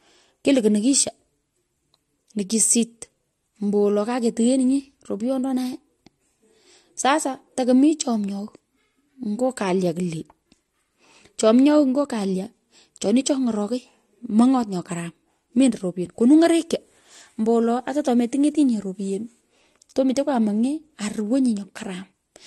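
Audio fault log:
Throughout, transcoding between lossy codecs: the speech has nothing above 12.2 kHz and two distinct layers of compression artefacts heard together, likely a low-bitrate MP3 re-encoded as AAC-LC, the second codec spending its bits on the first one's damage and adding its own.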